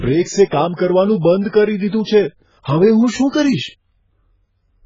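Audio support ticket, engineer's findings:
Dull, band-limited speech throughout, nothing above 7.5 kHz, warbly smeared sibilants. Likely AAC compression: AAC-LC at a very low bitrate, around 12 kbps, starving the upper bands.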